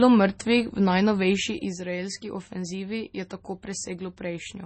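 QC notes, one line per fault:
Throughout: low-bitrate audio saved at a high bitrate. The speech was likely squeezed through a low-bitrate MP3 encode first, which fits something near 24 kbit/s, then re-saved at a much higher rate. Nothing above 8.4 kHz survives, and the swirly, smeared codec texture remains. The larger second file cannot restore either loss.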